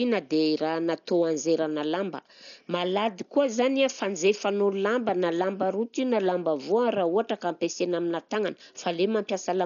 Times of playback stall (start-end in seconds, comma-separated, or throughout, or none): none